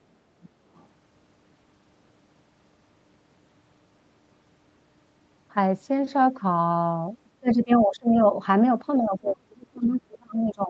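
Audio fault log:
0.43–0.49 s and 0.75–0.85 s, other side's voice leaking through: two faint, brief scraps of a second talker sit well under the main speech, roughly 30 to 35 dB down. This is likely loudspeaker playback reaching the microphone and not fully removed by the echo canceller.
7.4–8.19 s and 8.98–10.69 s, speech suppressed in double talk: the voice sinks sharply through most of the first span, by up to about 25 dB, and by about 30 dB at worst through the final stretch. The likely cause is the echo canceller pulling everything down while both sides talked at once.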